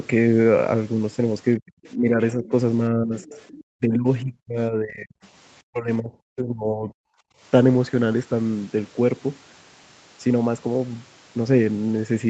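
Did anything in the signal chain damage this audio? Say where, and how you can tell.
Yes, the damage happened in the call processing stage, specifically in the echo canceller.

The speech is pulled down in three stretches: 1.58 to 2.52 s, by up to about 20 dB; 2.9 to 5.17 s, the worst, by up to about 40 dB; and 5.69 to 6.92 s, by up to about 25 dB. The likely cause is speech suppressed in double talk. The far side was talking at the same time, and the canceller couldn't separate the local talker from the loudspeaker's echo, so it attenuated both. The talker dips and drops away in pieces during these stretches.

Inside those same stretches, a second, faint voice comes through at 1.67 to 1.89 s (about 30 dB below the speech), at 2.46 to 2.51 s and at 3.2 to 3.61 s (both about 25 dB below). This is likely the other side's voice leaking through. The loudspeaker's output reached the microphone, and the canceller's filter didn't fully subtract it, so fragments of the far end survive behind the talker.

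From 7.2 to 7.4 s, the room tone drops by about 33 dB for a fifth of a second and then returns. This is background gated by the echo canceller. While it judged the loudspeaker to be active, the canceller clamped the microphone hard, and the background vanished until it released.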